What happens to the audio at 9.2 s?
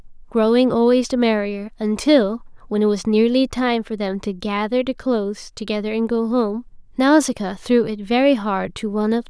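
Nothing goes wrong at 9.2 s; the audio there runs on intact, with no dropout, click, distortion or other fault.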